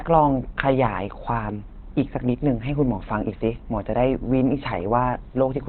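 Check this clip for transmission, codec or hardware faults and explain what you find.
One codec fault runs through the whole clip. The speech sounds muffled and hoarse, with nothing above 4.2 kHz; likely Opus compression at a very low bitrate, switched to its narrowband SILK speech mode.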